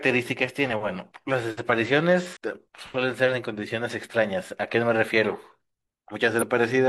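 Speech with damaged data in the compressed stream. Brief glitches sound at 2.33–2.37 s and 6.38–6.43 s, where the decoder misreads corrupted frames and loses sync.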